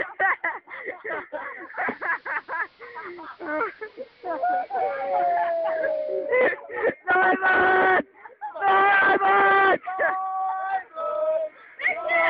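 At 1.58 s the sound cross-fades over about 0.4 s from the digital stream to the AM analogue broadcast. This is digital radio blending to analogue. The receiver lost its digital signal and fell back to the same station on AM. The narrow AM channel dulls the treble. The level drops by about 1 dB, and a hiss appears some 35 dB below the signal. At 6.38 s it blends back to digital.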